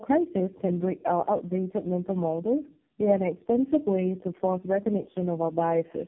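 From start to finish the speech carries tandem speech coding damage. The sound was decoded and re-encoded several times in a row, each coder working on the previous one's degraded output, which fits three low-rate AMR narrowband stages bridged by G.711 links. Nothing reaches above 3.7 kHz, so the speech is muffled and band-limited, and the stacked coding errors add a rough, gritty texture and a watery warble to it throughout.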